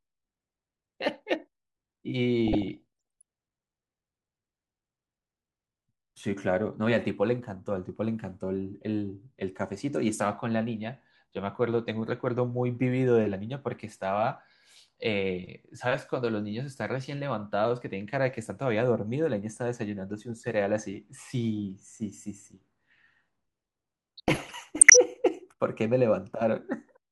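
DAB burbling appears from 2.47 to 3.22 s and again from 24.17 to 24.97 s. A weak signal lets a small fraction of bit errors slip past correction, so wrong samples land in single sub-bands. This gives short blips of noise, not the silent gaps of dropouts.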